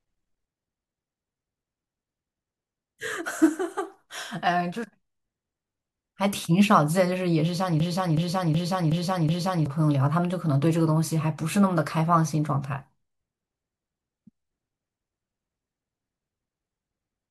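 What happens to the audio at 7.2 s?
At 7.2 s the speech carries on intact, with no audible dropout, distortion or glitch at that point.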